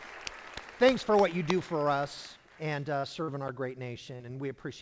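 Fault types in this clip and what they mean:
Short concealed packet loss: at 3.00–3.06 s, 3.23–3.31 s and 4.16–4.23 s, about 40 ms of the stream each time failed to reach the decoder in time. The receiver bridged each hole by extending the preceding sound, spending 33, 44 and 39 ms on the patch before crossfading back into real audio. Each patch comes across as a brief smeared wobble against the band-limited call sound, which stops at 8 kHz as G.722 does.
Block of digital silence: at 3.48 s, an 8 ms run of samples drops to silence and returns with no fade. Because the edges are hard, the gap comes across as a sharp tick rather than an audible pause. This points to an output buffer that was not filled in time, leaving the device to play nothing for that instant.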